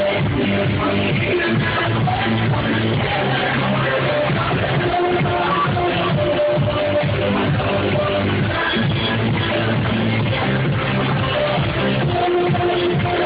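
No technical faults can be heard anywhere in the audio.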